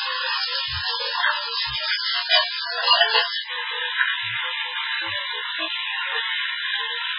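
MP3 compression runs throughout: nothing survives above 5.3 kHz, and watery, swirling artefacts pervade the sound, likely from an encoder starved of bits, consistent with roughly 8 kbps.

Input switched to a poorer device at 3.42 s: after an 80 ms gap, the band narrows to 4 kHz and noise appears about 30 dB down, likely from a lesser microphone.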